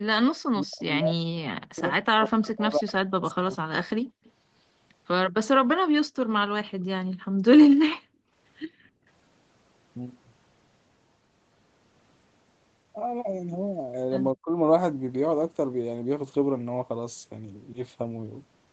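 Speech, with three kinds of call-processing fault. From 0.34 to 3.56 s, and briefly from 14.34 to 14.51 s, the voice drops by roughly 40 dB and then 35 dB. This is likely speech suppressed in double talk, and the waveform envelope collapses in jagged chunks. An echo leak adds a faint delayed copy of the voice, about 190 ms behind it: a short scrap around 30 dB down at 0.80 to 0.84 s, then 2.45 to 4.31 s around 20 dB down. The likely cause is an echo canceller letting loudspeaker pickup through, and the spectrogram shows ghost harmonics trailing the originals. The background is also gated by the echo canceller, with the room noise falling about 33 dB at 4.03 to 4.22 s and about 37 dB within 7.13 to 9.06 s. These gaps show as dark holes in the spectrogram's noise floor and flat stretches on the waveform.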